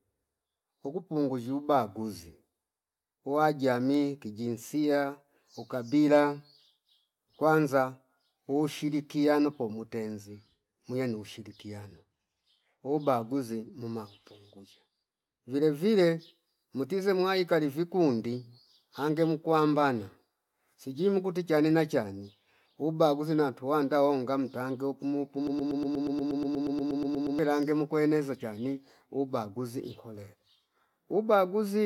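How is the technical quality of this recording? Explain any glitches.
The recording has one clear glitch, a broken-record loop. It runs from 25.47 to 27.39 s, right after "nantuwanda honga mtange oku". A fragment of about 120 ms repeats exactly, back to back, 16 times. This likely happened because the player or stream stalled and kept resending the last piece it held. You hear a rapid, mechanical stutter instead of continuing speech. The audio that belonged there is lost, and playback resumes at "mukweneza chani ubaguzi".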